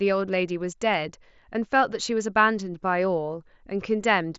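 No technical faults occur in this speech, which comes over an mSBC Bluetooth headset link with nothing above about 7.7 kHz.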